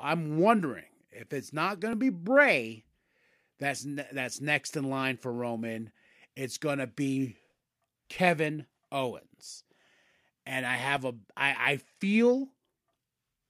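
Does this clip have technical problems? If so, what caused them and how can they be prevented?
Yes. There is a single sharp click at 1.93 s from dropped samples. Less than a millisecond of audio is missing, so the waveform jumps abruptly. The likely cause is a brief buffer underrun. Larger buffers and a less loaded recording system prevent it.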